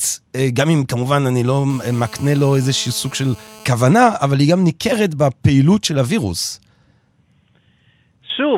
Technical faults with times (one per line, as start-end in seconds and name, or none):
1.70-3.65 GSM phone buzz